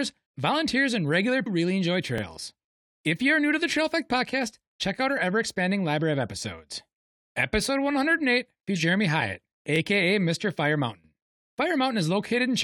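At 1.45 s, between "volunteers and regular" and "really enjoy", a brief glitch marks damaged data in a compressed stream. Corrupted bytes made the decoder misread a frame and lose sync until it found the next header. A second blip at 8.75 s has the same cause.

Overlapping chunks appear at 2.18 s, just after "really enjoy", and again at 9.76 s and 12.28 s. The audio was handled in 2.5 s chunks, and each new chunk began about 25 ms before the previous one ended. That replayed slice is heard as a short stutter-click at each join.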